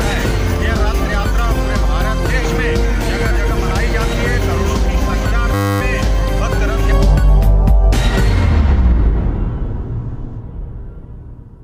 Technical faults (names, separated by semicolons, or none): system hang loop